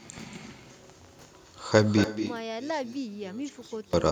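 Throughout the speech, echo with no canceller adds a quieter, thinner copy about 9 dB down, trailing by roughly a fifth of a second. That fixed lag distinguishes it from natural room reverberation.

From 2.04 to 3.93 s the speech collapses by about 28 dB to a faint residue rather than silence, so it is not a dropout. The likely cause is one channel inverted, cancelling when the channels are summed to mono.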